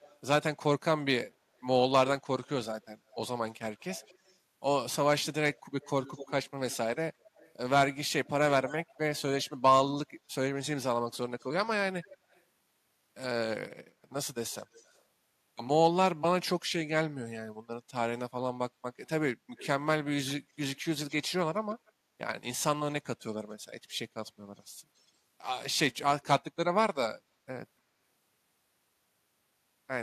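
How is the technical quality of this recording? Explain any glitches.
The recording is marred by a recurring echo leak: a faint, delayed copy of the speech trails behind it at 0.0–0.18 s, 1.61–12.42 s, 14.51–15.01 s, 19.05–21.92 s and 23.5–25.12 s. The delay lengthens from 227 to 283 ms. The copy sits roughly 20 dB below the speech in the long stretches and fainter, 30–40 dB below, in the short ones. It likely comes from a loudspeaker whose echo canceller let residue back into the call. On a spectrogram, each syllable's pattern repeats dimly about a quarter-second later. A waveform shows small trailing bumps.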